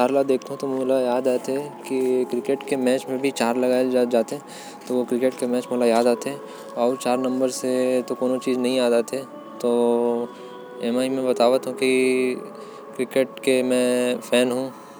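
No technical faults are audible.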